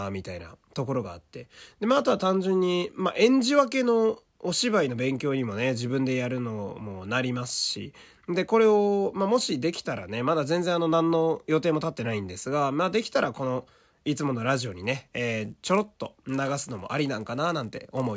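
Speech that, from 14.46 s to the end at 18.17 s, gains a 100 Hz buzz caused by a resampler restarted on every block: each 10 ms block was converted from 48 kHz to 16 kHz alone, leaving an edge error every block. Unlike mains hum, it vanishes in pauses.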